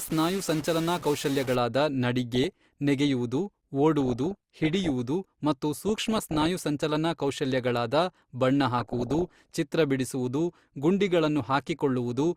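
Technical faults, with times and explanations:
0.00 to 1.55 s, stuck bit: The speech carries a distortion, and the gaps between sounds fill with noise instead of silence. This likely comes from one data bit held at a fixed value, shifting about half the samples by that bit's weight.
2.35 to 2.73 s, 4.00 to 4.90 s, 5.73 to 6.46 s and 8.77 to 9.56 s, DAB burbling: Bursts of burbling sit over the speech. Bit errors slipped past error correction into the MP2 data, putting short blips of noise into single sub-bands and, through wrong scale factors, making sub-bands jump in level for up to a frame. The error rate is around one percent, roughest in the last burst.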